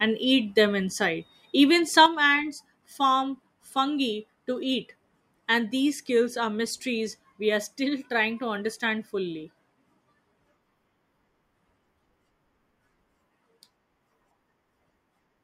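A digital gain setting was likely applied instantly instead of being ramped, so at 2.06 s a sudden gain jump drops the level by about 6 dB from one sample to the next. The speech and its background noise fall together and stay lower until the end.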